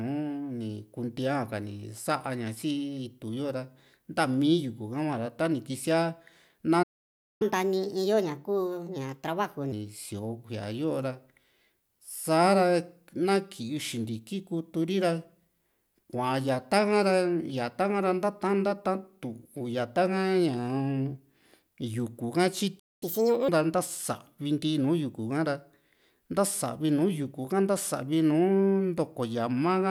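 Speech with two playback faults. Twice the player likely ran out of buffered data, causing a playback stall: the sound cuts to silence from 6.82 to 7.42 s (about 0.58 s) and again from 22.79 to 23.03 s. Each time the player then resampled its backlog to win back lost time, a catch-up at higher speed: the audio runs at 1.25 times normal speed from 7.42 to 9.72 s, pitch raised roughly four semitones, and at 1.5 times from 23.03 to 23.48 s, roughly seven semitones higher, before returning to normal.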